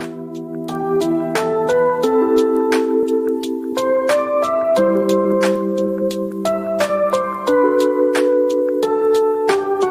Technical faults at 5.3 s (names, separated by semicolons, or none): clock drift between sender and receiver; repeated timing corrections